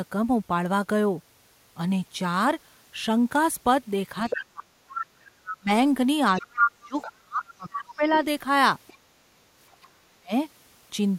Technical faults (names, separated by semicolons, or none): other side's voice leaking through; speech suppressed in double talk